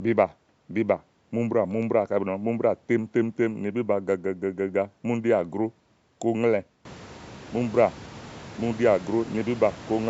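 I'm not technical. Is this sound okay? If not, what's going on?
Yes, nothing is wrong here; the background room noise gets noticeably louder from about 7 s but stays well beneath the speech.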